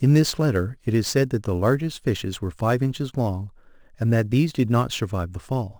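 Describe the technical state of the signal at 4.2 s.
A fine hiss-like roughness rides on the speech at 4.2 s, as it does throughout, swelling on loud and bright sounds and vanishing in pauses. This is sample clock jitter: timing wobble of roughly ten microseconds misplaces samples, leaving error around 25 dB below the signal.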